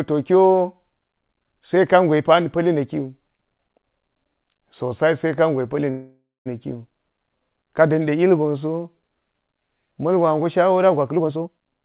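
Speech over a call path band-limited at 4 kHz, which fits G.711 mu-law. A call audio freeze runs from 5.90 to 6.48 s. The last sound drags on and fades, with about 230 ms of silence, likely from delayed packets draining the jitter buffer. A jitter buffer speed-up follows from 11.09 to 11.81 s. Speech runs at 162% speed, same pitch, as roughly half a second is trimmed to cut delay.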